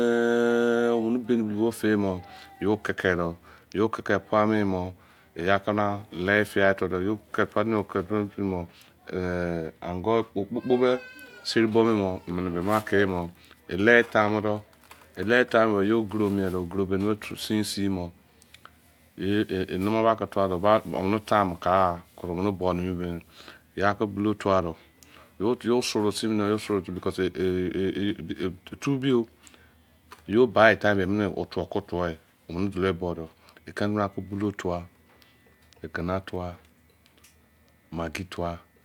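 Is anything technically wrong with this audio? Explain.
No, nothing is technically wrong with this audio.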